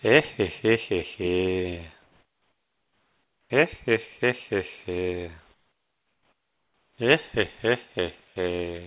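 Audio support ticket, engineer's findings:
Comfort noise in place of the background at 2.03–3.5 s, 5.54–6.98 s and 8.24–8.36 s: room tone turns to steady, featureless hiss, about 7, 11 and 2 dB quieter. Likely discontinuous transmission at the sender, with synthetic noise filled in at the receiver. Unlike a gate or dropout, the gap is never silent. Unlike over-suppression, the detail vanishes abruptly and returns when sound resumes. Audible band stops at 4 kHz on the G.711 call path.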